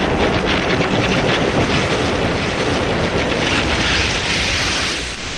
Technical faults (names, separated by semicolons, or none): sound dropped by the voice detector